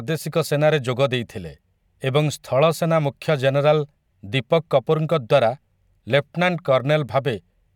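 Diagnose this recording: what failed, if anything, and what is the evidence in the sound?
Nothing failed; the speech shows no audible fault anywhere.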